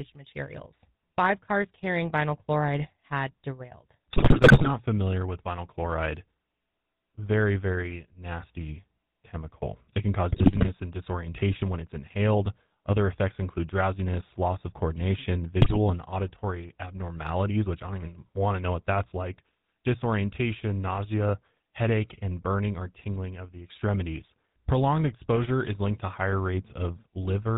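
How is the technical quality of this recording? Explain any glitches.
The recording is speech passed through a GSM phone channel. The GSM coding colours the whole clip, and transmission errors cause three short bursts of damage.

GSM full-rate codec: Across the entire clip the speech has the buzzy, gravelly roughness of the original GSM full-rate coder, which fits its 13 kbps rate. The coder models the vocal tract and drives it with a sparse pulse excitation, and it discards everything above 4 kHz.

GSM bit errors: These occur at 4.10–4.71 s after "vinyl chloride had derailed", at 10.30–10.70 s before "and disorientation when it's", and at 15.60–15.77 s after "drowsiness loss of coordination". Flipped bits corrupt the filter, pitch and gain values, which produces squawks, pops and gargling. This points to an error rate of about 5 percent.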